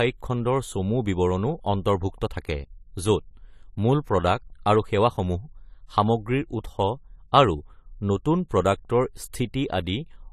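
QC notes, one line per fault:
Throughout, AAC compression: the top end stops dead at 14.1 kHz, and the speech sounds dull and smeared, with a fizzy, warbly edge on sibilants. That's likely an AAC-LC encode at a low bitrate, around 32 kbps, quantising coarsely against its hearing model.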